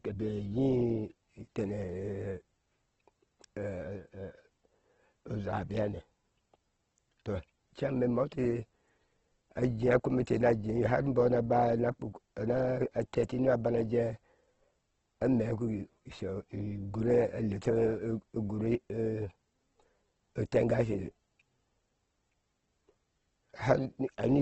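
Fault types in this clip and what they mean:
Opus compression: The speech sounds rough and grainy throughout, with a noisy, fizzy texture where tonal detail should be, and the top end is cut away so that nothing reaches above about 8.2 kHz. This is likely heavy Opus coding in its music mode at a very low rate, around 12 kbps. Short of bits, the encoder fills bands with folded or noise-like content and narrows to wideband.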